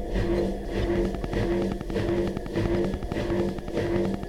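From 0.96 s to 4.24 s a train of clicks runs over the sound, about forty near-identical pulses at a regular 10.7 per second. Each click stands roughly 10 dB above the surrounding audio, so the ticking stays plainly audible throughout rather than blending in. The steady rate and uniform shape point to a periodic disturbance entering the signal path, likely interference from nearby equipment or a faulty connection or power supply repeatedly injecting the same pulse.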